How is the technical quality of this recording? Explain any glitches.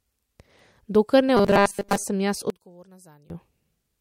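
Two glitches stand out in this speech recording.

From 1.37 to 2.06 s the voice turns into a rigid, metallic buzz pitched at 200 Hz, still loosely following the syllables. This is robotic sound from repeated short buffers, likely caused by audio arriving too seldom: the playback fills the gaps by looping the last fragment, most of the time, instead of fresh audio. A 200 Hz buzz fits a loop about 5 ms long, so the repetition imposes that fixed pitch.

From 2.50 to 3.30 s the voice drops by about 24 dB, becoming a faint remnant rather than a full-bodied sound. This points to one channel inverted, likely heard through a mono sum: with one side's polarity flipped, everything shared by both channels cancels, including the centred voice and its low end. Only the small differences between left and right survive.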